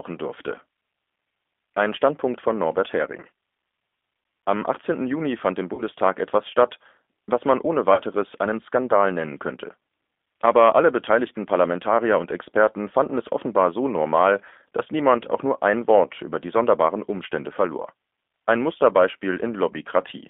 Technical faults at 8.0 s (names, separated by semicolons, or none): G.729 codec; VoIP packet loss concealed by the speech codec